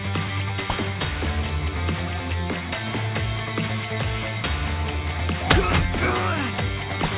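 From the first moment to the end there's aliasing running through the whole thing. It sounds like the audio was dropped to a much lower rate with no filter in front. Everything above 4 kHz has folded back down into the band as wrong, unrelated tones, and those sit only about 10 dB under the real content. Hissy, bright sounds come out gritty and metallic, and the top end stays crowded right up to 4 kHz, which fits a conversion to an 8 kHz rate.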